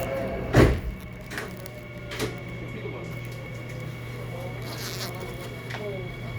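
Nothing stood out on listening to this recording of sounds.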